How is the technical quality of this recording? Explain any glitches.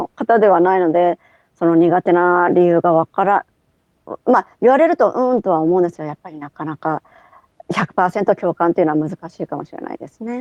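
One glitch stands out. From 5.33 to 5.39 s, a lost packet was rebuilt from error correction: a low-bitrate backup copy replaced the missing speech, so there's no gap, just a brief rough, noisy patch, consistent with about two lost packets.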